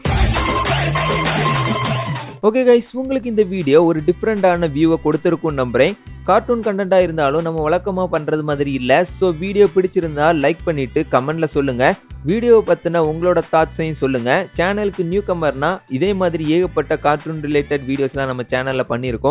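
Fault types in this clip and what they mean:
No faults are audible anywhere in the recording.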